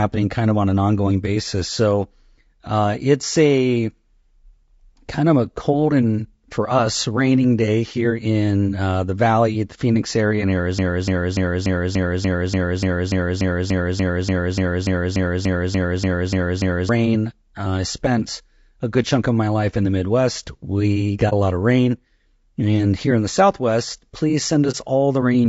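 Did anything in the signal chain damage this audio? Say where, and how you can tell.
Yes. The damage starts at the codec stage. From start to finish the speech sounds rough and grainy. Noise fills the gaps between the harmonics, and the top band sounds thin and synthetic. The damage is plainly audible. This is low-delay AAC compression, likely AAC-ELD at a low rate, which fits about 32 kbps. Its short frames cannot separate pitch harmonics cleanly. At this bitrate the encoder cannot spend enough bits to fix that.

The second fault is a broken-record loop, between 10.79 and 16.89 s. A 0.29 s fragment repeats exactly, back to back, about 21 times. Whatever should have played in those six seconds is gone. The exact, seamless repeats point to a stall further down the chain, likely in the encoder, stream or player. That stage kept resending the last fragment it held instead of new audio.

The third fault is AAC frame loss with muting, in transport or at the decoder. 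It happens twice, from 21.29 to 21.33 s and from 24.71 to 24.75 s. Each time the sound fades out and back in, leaving a brief dip. Each gap matches about 30 ms of missing audio, which fits a single lost frame. The decoder zeroed that frame's spectrum. The overlapping windows then smoothed the edges into fades.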